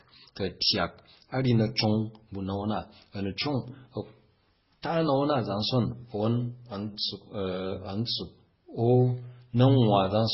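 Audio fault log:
Throughout, transcoding between lossy codecs: the speech has nothing above 5.6 kHz and carries artefacts of two different kinds at once. This likely comes from a low-rate MP3-style encode followed by a second Opus-style encode, which spends bits re-coding the first codec's damage and adds its own.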